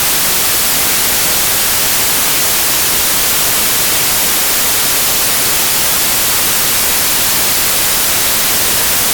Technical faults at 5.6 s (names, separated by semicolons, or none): samples built from the wrong bytes